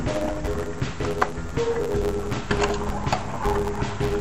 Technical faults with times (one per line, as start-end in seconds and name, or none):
0.00-4.20 interleaved audio read as planar